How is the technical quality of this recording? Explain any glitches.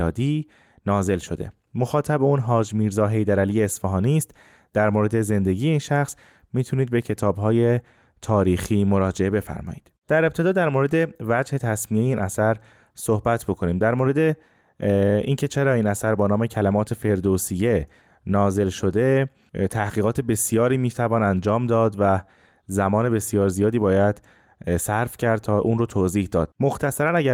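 The recording has no technical glitches to explain. Nothing in the speech breaks, skips or stands out as a fault at any point.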